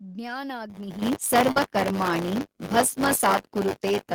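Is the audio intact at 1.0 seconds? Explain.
No. Buffer tearing runs from 0.69 s to the end of the clip. The writer and the hardware reader have slipped out of step, so roughly a tenth of each buffer holds audio from about 20 ms earlier, with hard joins on both sides. This produces a robotic 100 Hz buzz, which fits a 10 ms period.

At 1.02 s the microphone volume is stepped up by about 10 dB in one jump. The call software raised the device's input gain, so the speech and the background noise both become louder at once, with an abrupt level change.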